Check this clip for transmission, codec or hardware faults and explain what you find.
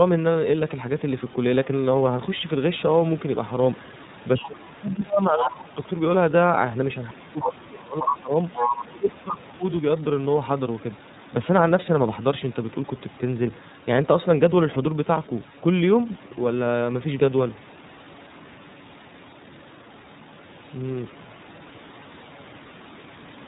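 The speech went through the iLBC codec and also shows echo-canceller trouble in three places.

The iLBC codec coded the whole clip in 30 ms frames at 13.33 kbps and passed nothing above 4 kHz, so the speech sounds plainly narrowband, rough and slightly synthetic.

Speech suppressed in double talk occurs at 4.47 to 5.78 s, 7.1 to 8.31 s and 8.83 to 9.63 s. An echo canceller likely mistook simultaneous talk for echo and attenuated everything, so the talker dips by as much as about 25 dB.

The other side's voice leaks through at 5.23 to 5.65 s, 8.10 to 8.15 s and 8.54 to 8.83 s. Loudspeaker echo was likely not fully cancelled, so a second voice intrudes. It is slightly quieter than the talker in the first stretch and about as loud in the later two.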